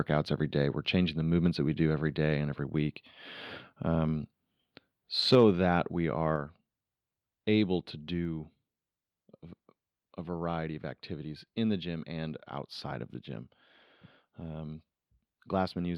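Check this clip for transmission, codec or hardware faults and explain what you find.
Two faults affect this speech clip: a microphone overload and two downward steps in microphone volume.

From 5.32 to 5.45 s there is microphone overload. Peaks run about 3 dB over the converter's limit, likely from excessive input volume, so a few percent of samples are flattened and crackle.

Microphone volume stepped down at 5.35 s by about 3 dB, then at 6.36 s by about 4 dB. Voice and background drop abruptly, likely from call software reducing input gain.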